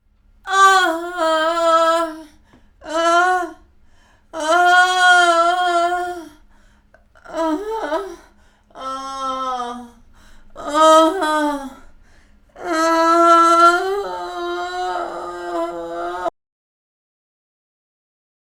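A clip of everyday sounds that runs along fine until about 16.28 s, when it hits an audio dropout to silence and just goes dead right through to the end. It's not a fade or a quiet patch; the gap is pure silence with no room tone underneath, so whatever happened in those last couple of seconds is simply gone. That sudden dead silence most likely means the input got disconnected or muted while the recorder kept writing.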